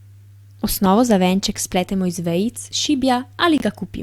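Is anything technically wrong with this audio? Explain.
Yes. There are two faults, both from damaged compressed frames.

At 0.86 s, just before "za venček", there is a corrupt frame decoded. Flipped bits reached the decoder, and it played the frame anyway. Misread data put energy at wrong frequencies. The result is a brief, loud blip near -10 dBFS, spanning a couple of frames.

From 3.58 to 3.61 s there is a corrupt frame muted. The decoder rejected damaged frames, and the player filled the gap with silence. The speech drops out abruptly for about 38 ms, which fits two lost frames. Timing stays intact around the hole.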